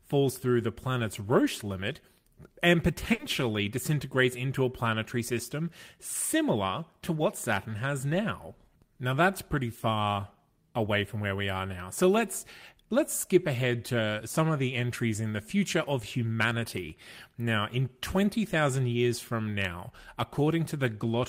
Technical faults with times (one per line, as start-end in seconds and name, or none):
3.13-3.22 burst of packet loss